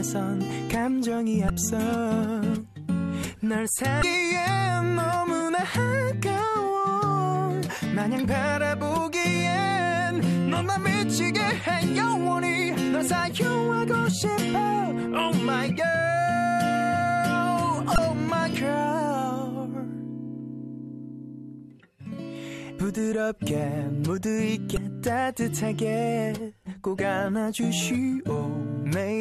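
Damaged data in a compressed stream corrupts frames; the decoder loses sync and resynchronises, leaving brief glitches at 1.47–1.50, 4.00–4.03, 17.95–17.98 and 24.74–24.77 s.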